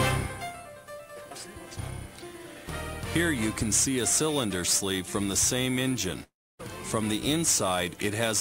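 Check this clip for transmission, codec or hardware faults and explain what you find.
One fault, a long network dropout, from 6.23 to 6.61 s. The last sound is stretched into a fading buzz, then about 280 ms of near-silence, likely from packets stopping entirely. Unlike brief packet loss, the concealment gives out and about 360 ms never returns.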